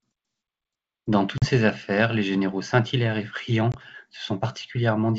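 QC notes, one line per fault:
1.38–1.50 s and 3.72–3.75 s, packet loss on an ADPCM call: speech drops into hard-edged silence, about 40 ms of missing audio (about two packets) just before "affaires les généraux", then about 20 ms (roughly one packet) later. After each gap the decoder's adaptive predictor and step size no longer match the sender's, so the clear wideband G.722 sound returns with brief slight distortion before resynchronising.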